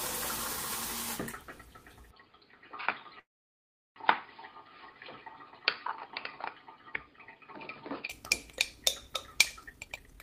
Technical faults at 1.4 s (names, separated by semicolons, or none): none